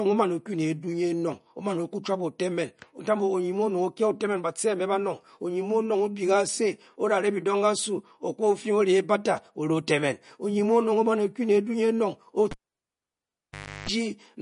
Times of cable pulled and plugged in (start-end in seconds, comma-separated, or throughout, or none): 12.51-13.89